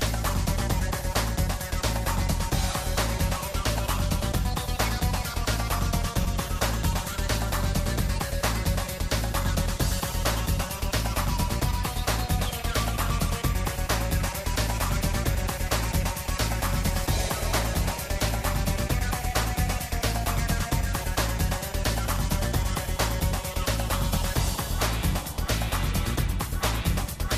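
At 6.23 s, and again from 7.11 to 7.13 s, there are chunks out of order. A block of roughly 5.33 ms is played after the blocks meant to follow it. It lands two blocks late the first time and three late the second. Nothing is dropped, but each reordering leaves three hard joins, heard as a brief jumbled moment.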